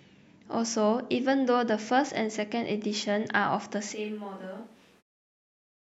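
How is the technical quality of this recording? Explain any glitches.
The recording has one clear fault: a switch to a distant microphone.

From 3.96 s to the end, the speech abruptly turns roomy and hollow. It loses bass and drops by about 10 dB, and room noise rises to roughly 30 dB below the speech. The close microphone's signal has likely dropped out, leaving a farther pickup such as a camera microphone. A plain gain drop wouldn't add reflections, and added reverb wouldn't thin the low end and lower the level together. The short fade-out near 5.0 s sits within this distant-microphone section.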